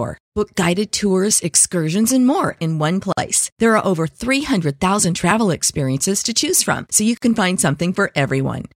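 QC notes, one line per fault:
3.12 to 3.17 s and 7.17 to 7.22 s, gap at a join of encoded pieces: the audio was encoded in separate pieces, apparently every 4 s, and joined without trimming the encoder's start delay and last-frame padding. This leaves gaps of about 50 ms and 49 ms with smeared edges, right after "and more in one" and between "choose from so you" and "can find". The speech then resumes where it stopped.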